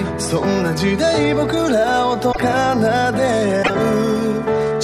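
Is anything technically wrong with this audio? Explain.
Yes. At 2.31 to 2.40 s and 3.62 to 3.70 s, the audio skips ahead and breaks up for about 0.08 s. The likely cause is a broken MP3 bit reservoir. Frames were lost, so following frames, which fit 26.1 ms frames, borrowed the wrong bytes.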